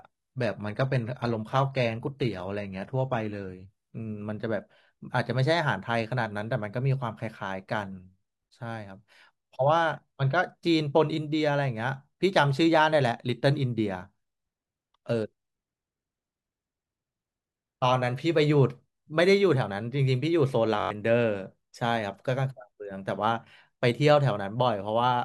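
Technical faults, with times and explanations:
0.0–4.0 s, adaptive stream starting at a low bitrate: the speech opens dull and papery, with a thin, hissy, synthetic-sounding top end and smeared, warbling codec artefacts, then at 4.0 s the detail and clarity snap into place with no gap. The player began on a cheap version of the stream so playback could start at once. The band-replicated treble fits roughly 20 kbit/s HE-AAC, and the cleaner sound after the step fits AAC-LC near 96 kbit/s.
20.80–20.91 s, system hang loop: a short, hard buzz cuts across the speech. It is one 21.33 ms fragment repeated exactly five times at 46.9 Hz, so it sounds like a low buzz rather than a stutter. The machine or driver stalled while the audio hardware kept replaying the same ring buffer, which fits a 1024-sample buffer. About a tenth of a second of real audio is lost under the buzz.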